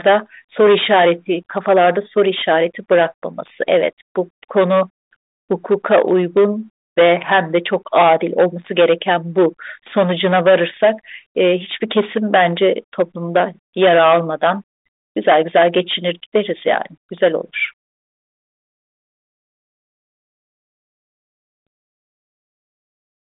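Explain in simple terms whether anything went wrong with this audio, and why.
Hard clipping runs throughout: the speech was driven too loud, so roughly one sample in twenty has its peak sliced flat. It crackles on loud moments.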